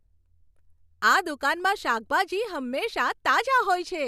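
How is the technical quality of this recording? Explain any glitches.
No glitches or technical faults can be heard anywhere in the recording, so there is nothing to explain.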